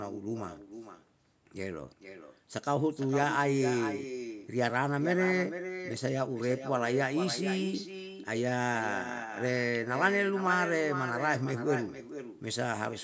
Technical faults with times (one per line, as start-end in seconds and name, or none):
0.00-13.04 echo with no canceller